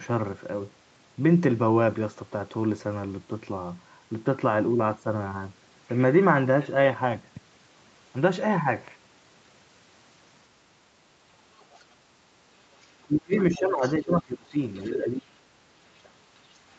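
From 11.59 to 11.84 s, the other side's voice is leaking through, very faint. The likely cause is loudspeaker echo the echo canceller left in. From 12.83 to 13.36 s, speech is suppressed in double talk. The level drops by roughly 40 dB. The canceller likely could not separate the talker from the echo while both spoke. From 13.55 to 14.56 s, the voice dips again, by roughly 20 dB. A louder leak of the other side sits inside it, from 13.81 to 13.95 s. A faint leak follows from 14.81 to 14.90 s. The voice is turned down from 14.87 to 15.85 s and from 16.03 to 16.24 s, each time by roughly 25 dB.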